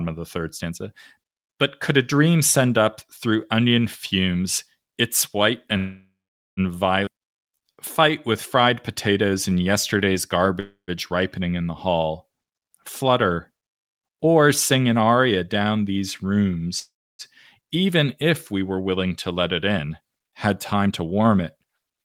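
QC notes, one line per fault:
5.77 to 6.60 s, call audio freeze: right after "onion fumes its white" the sound stops moving forward and the last fragment is stretched into a fading buzz for about 0.8 s, with roughly 0.46 s of that near silence. Nothing is lost, and the audio resumes exactly where it halted. This is likely packets held up in transit, leaving the jitter buffer empty so the receiver had to fill the wait.
7.05 s, skip ahead: a hard forward jump with almost no gap, only about 15 ms of filler. Something like 0.4 s of audio is gone, and the two sides are butted together. The jump cut the lag by roughly 0.3 s.
7.14 to 10.55 s, jitter buffer slow-down: the speech runs at about 93% speed with unchanged pitch up to "ripening in the hall", adding about 231 ms. Single pitch periods and bits of pauses were repeated many times over to rebuild a buffer reserve, which draws sounds out.
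10.60 to 10.91 s, call audio freeze: just before "ripening in the hall" the sound hangs again as a decaying buzz for about 0.28 s, about 0.11 s of it silent, then carries on with nothing missing. Likely another late packet burst that emptied the jitter buffer. 16.80 to 17.22 s, call audio freeze: a longer hold of about 0.4 s, roughly 0.3 s of it silent, again resuming where it stopped with no loss. The likely cause is the same delayed delivery.
13.04 to 16.31 s, jitter buffer speed-up: about 4% fast at the same pitch, with roughly 150 ms of audio removed in short pitch-period slices. The buffer held more than its target and was trimmed. 19.05 to 21.63 s, jitter buffer speed-up: stronger, at about 110%, with around 0.3 s removed. The speech sounds noticeably rushed as excess buffered delay is cut.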